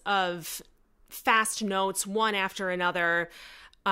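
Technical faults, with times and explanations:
No technical faults are audible in this speech recording.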